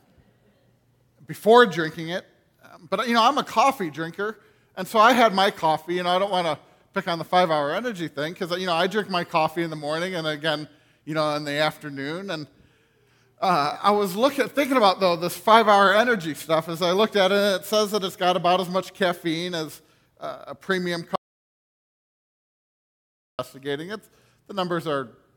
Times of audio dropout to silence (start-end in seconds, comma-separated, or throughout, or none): 21.16-23.39